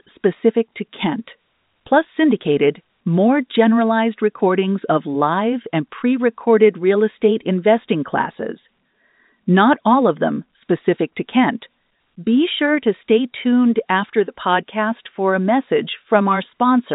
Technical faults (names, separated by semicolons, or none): none